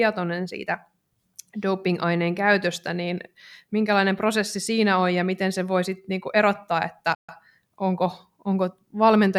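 Speech that cuts to silence for about 135 ms, from 7.15 to 7.29 s, right after "sitten niinku erottaa että", then resumes: a playback stall, likely the player running short of data.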